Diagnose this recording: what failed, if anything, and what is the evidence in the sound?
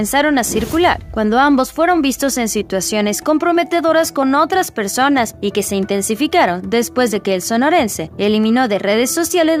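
Nothing in the signal points to a failure at any stage: the audio is continuous, with no dropouts, clicks, level jumps, distortion or timing disturbances.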